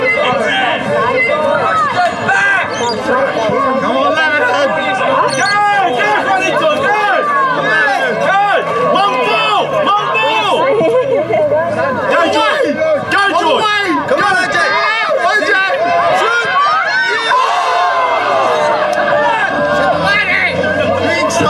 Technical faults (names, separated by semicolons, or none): corrupt frame decoded